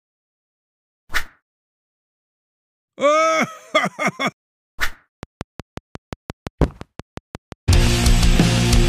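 From 5.23 s to 8.77 s, a train of clicks runs over the sound. About twenty sharp ticks arrive at a steady pace of roughly 5.7 per second. Each click has much the same shape. They stand out clearly, peaking about 5 dB above the surrounding sound, and they keep ticking through any quieter moments. The likely cause is interference from nearby equipment or a faulty connection or power supply injecting a repeated pulse into the signal.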